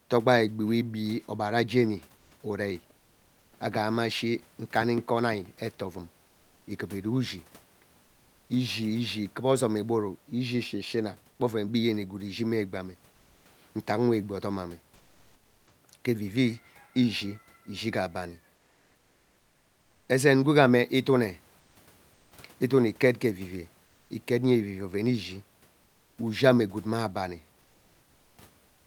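At 2.17, 13.11, 18.55, 21.59, 22.13, 23.85, 25.83 and 28.67 s, the room noise behind the speech gives way to comfort noise in place of the background, lasting from 0.14 s to 1.52 s. The longest falls between "ishi gee abani" and "ezen gwega". These pauses fill with a smooth, featureless hiss, about 1 to 4 dB quieter except at 2.17 s, where it is about 3 dB louder. The likely cause is Opus discontinuous transmission. Unlike a noise gate, the pauses never drop to true silence.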